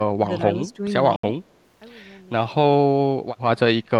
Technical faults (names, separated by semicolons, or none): speech suppressed in double talk; Bluetooth dropout